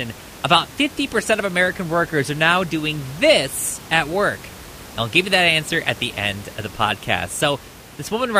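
The speech signal shows no technical faults, with only the room's own background noise present at about 19 dB below the speech.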